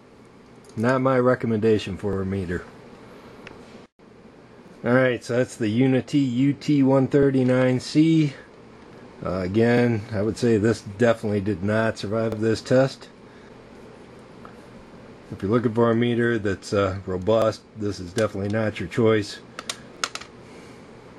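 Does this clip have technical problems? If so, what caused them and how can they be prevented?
Yes. There are overlapping chunks: at 2.13, 4.68, 7.23, 9.78, 12.32, 14.87, 17.42 and 19.97 s you get a short stutter where 48 ms plays twice, because each 2.5 s chunk starts before the previous one ends. Match the hop to the chunk length, or crossfade the overlap instead of replaying it.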